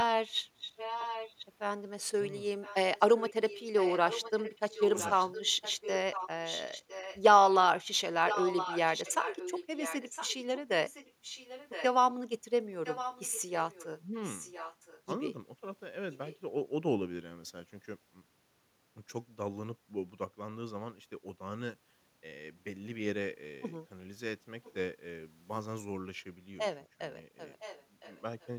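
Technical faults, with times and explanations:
0.6–1.46 s, 2.61–7.2 s, 8.27–11.84 s, 12.84–15.02 s, 16.12–16.38 s, 24.64–24.73 s and 27.59–28.47 s, echo leak: a second copy of the speech trails the original by about 1.01 s. It is some 10 dB below the direct sound in the first three stretches and weakens to roughly 15–25 dB down later. The likely cause is a far-end loudspeaker whose echo canceller let part of the microphone pickup through, sending the speech back down the line late.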